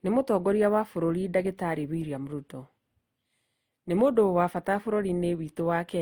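Throughout the speech, the audio has likely been through transcoding between lossy codecs. The sound fits an HE-AAC encode at around 40 kbit/s, then a second encode to Opus at around 32 kbit/s. The second encoder has no way to tell the first one's artefacts from the real signal, so it spends bits on them and adds its own. Two kinds of coding damage are heard together, and the top of the spectrum ends near 20.2 kHz.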